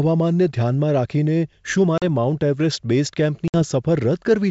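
At 1.98 s the speech cuts to silence for 40 ms, and at 3.48 s a 60 ms gap follows. Both are packet loss on an ADPCM call, with hard-edged holes. The decoder's predictor then falls out of step with the sender's, so the speech returns slightly distorted before settling.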